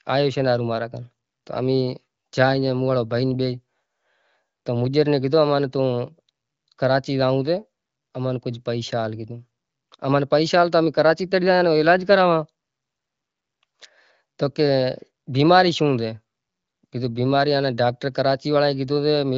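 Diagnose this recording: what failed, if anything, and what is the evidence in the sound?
Nothing stood out on listening; the speech has the sound of a wideband AMR-WB (HD Voice) path at a high rate, with nothing above about 7.5 kHz, and no stage of the chain gives itself away as having failed.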